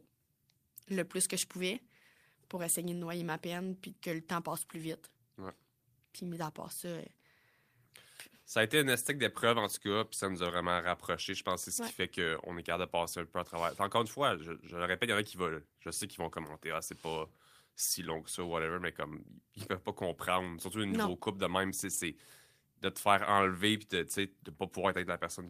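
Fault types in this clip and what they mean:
There are no fault types in this clip.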